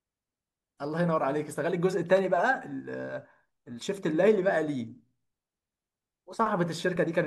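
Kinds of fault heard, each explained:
Electrical switching spike: a nearby switch or motor likely arced into the audio line, adding a sharp snap peaking around -25 dBFS over the speech at 2.17–2.19 s.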